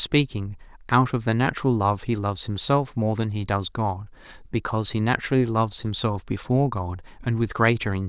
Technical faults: none

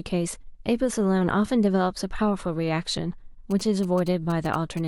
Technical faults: GSM signalling bursts

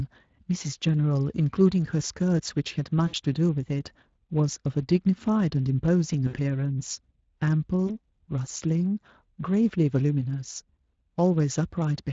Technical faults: Speex codec; VoIP packet loss concealed by the speech codec

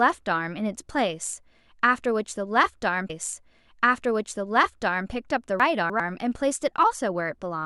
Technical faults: stream segment repeated; chunks out of order

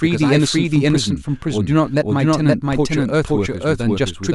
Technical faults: doubled audio track

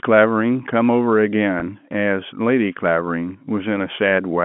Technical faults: packet loss with pitch repetition

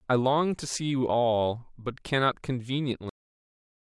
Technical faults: cut-off end

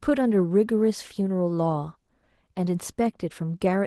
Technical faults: Opus voice compression

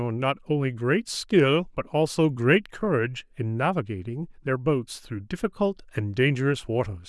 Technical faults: none

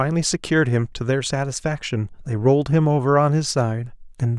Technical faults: none

